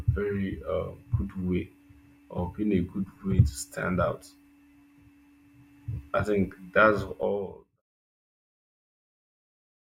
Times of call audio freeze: none

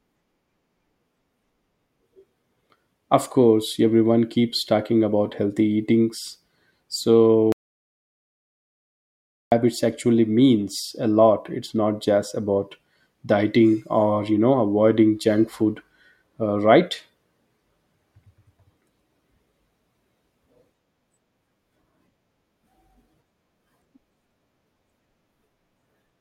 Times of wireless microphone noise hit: none

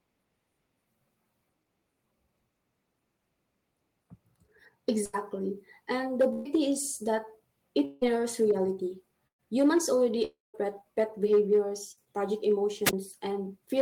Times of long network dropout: 7.85-8.03, 10.25-10.56

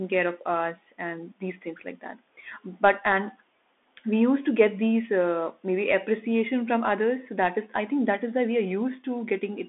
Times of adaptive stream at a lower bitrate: none

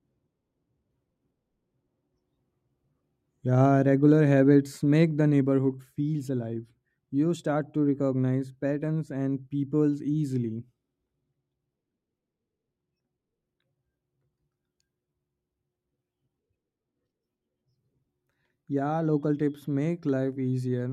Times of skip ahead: none

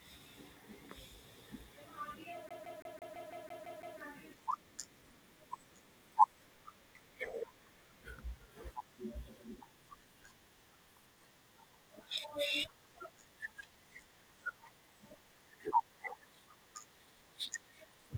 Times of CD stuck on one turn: 2.49-3.99

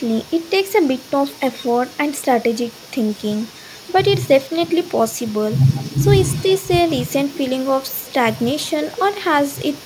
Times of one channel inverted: none

